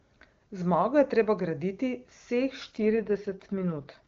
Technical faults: AMR rate drop

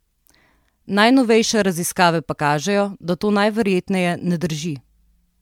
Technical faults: generation loss

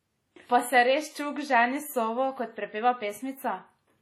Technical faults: WMA compression

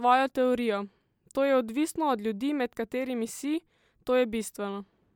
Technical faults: none

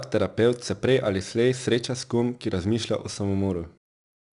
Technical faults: 4-bit ADPCM compression

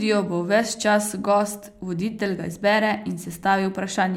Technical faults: none

